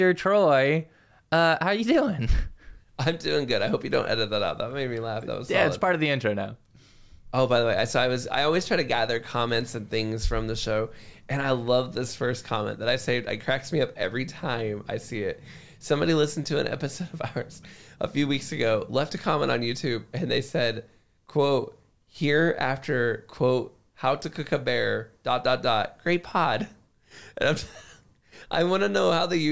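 Nothing here points to a technical problem; there's no fault to report anywhere in the audio.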